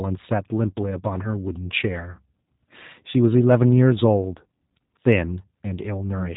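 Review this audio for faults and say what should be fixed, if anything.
The whole clip carries plainly audible G.729 codec damage from start to finish. The speech has that thin, slightly rough, synthetic quality you get when a codec rebuilds the voice from a vocal tract filter, a pitch predictor and a handful of pulses per short frame instead of sending the waveform. Nothing above 4 kHz comes through, so it sounds muffled and phone-like, which fits the 8 kbit/s G.729A flavour. To fix it, record or route this through a wideband codec such as G.722 or Opus at a higher bitrate instead of G.729.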